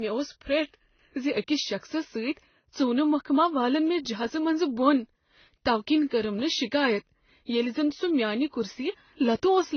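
Throughout the speech, the top end stops dead at 6.3 kHz, which shows as a flat ceiling on a spectrogram. Below it, the artefacts of two different coders blur together. This points to transcoding between lossy codecs, likely AAC-LC followed by Vorbis at rates near 24 kbit/s.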